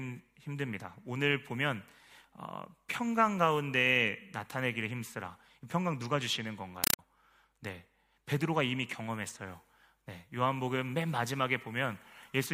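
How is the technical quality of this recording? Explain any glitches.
One glitch affects the speech recording. From 6.84 to 6.99 s the sound gives way to loud, harsh chattering static, a compressed stream played as audio. Encoded data, which fits an AC-3 stream, went through as ordinary samples without being decoded. Each frame plays as a 4 ms noise burst followed by zero padding, repeating at 31.25 Hz.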